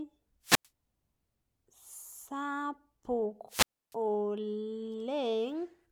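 Two wireless microphone squelch dropouts interrupt the speech. The first runs from 0.43 to 0.68 s, muting for about 95 ms. The second runs from 3.48 to 3.95 s, muting for about 296 ms. Each time, the radio signal weakens, hiss rises, and the receiver's squelch cuts the output to near silence before the speech returns.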